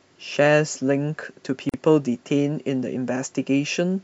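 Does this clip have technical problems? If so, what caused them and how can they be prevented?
Yes. At 1.69 to 1.74 s the speech stops for about 45 ms, a gap at a join of encoded pieces. Separately encoded segments kept their encoder start delay and final-frame padding. Unlike a dropout, nothing is lost: speech resumes exactly where it stopped, with smeared edges. Prevent it by trimming encoder delay and padding before joining, or by encoding the audio as one continuous stream.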